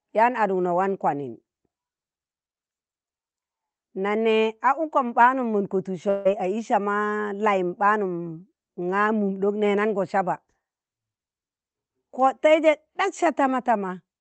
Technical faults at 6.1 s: long network dropout

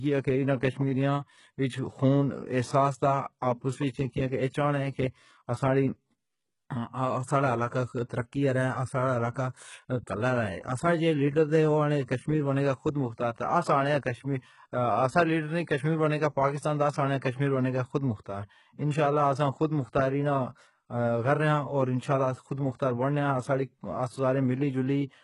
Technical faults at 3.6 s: HE-AAC compression

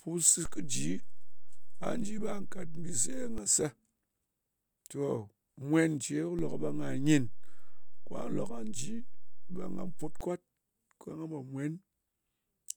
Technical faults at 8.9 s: DC step

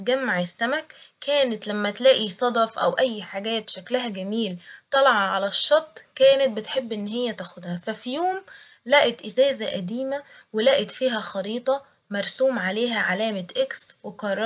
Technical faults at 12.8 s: none

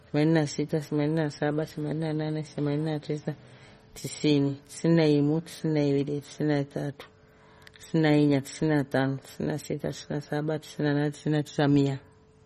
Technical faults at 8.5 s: MP3 compression

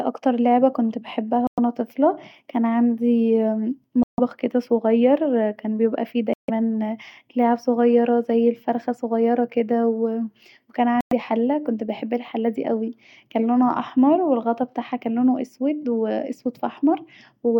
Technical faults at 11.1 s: Bluetooth dropout

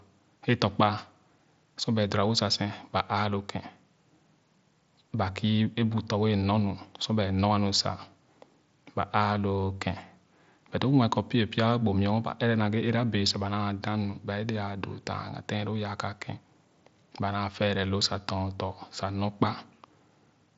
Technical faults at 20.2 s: none

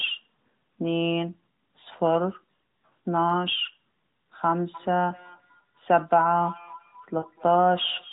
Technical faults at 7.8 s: feedback echo between two devices

